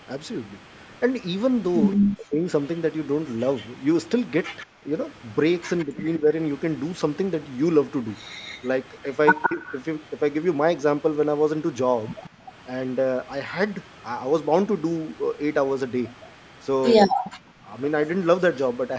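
From the start right through to 18.77 s there's a faint echo leak trailing the speech by 168 ms, well down in level, roughly 25 dB. That's likely a speakerphone whose echo canceller let some of its pickup back through.

Speech suppressed in double talk chops the talker at 1.95–2.46 s and 17.13–17.69 s, with deep drops of roughly 40 dB. Lighter dips come at 4.65–4.89 s, 5.85–6.26 s and 9.48–9.63 s. It's likely the canceller ducking everything while both sides talked at once.

At 12.3–12.45 s the background gated by the echo canceller dips about 20 dB for a moment, then the room sound comes back once it lets go.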